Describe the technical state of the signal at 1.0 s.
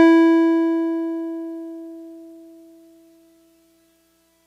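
At 1.0 s the music comes through intact, with no audible dropout, distortion or other signal fault at that moment.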